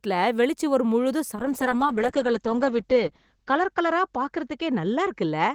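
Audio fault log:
1.37 s to the end, call bitrate drop: right after "வெளிச் சுவர் முழுதும்" the speech goes rough and muffled, with the top end shaved off. That fits the encoder being pushed from around 32 kbps down to about 8 kbps. With so few bits Opus codes everything coarsely and narrows the band from roughly 20 kHz to about 8 kHz. It bottoms out for about 1.82 s and doesn't recover before the clip ends.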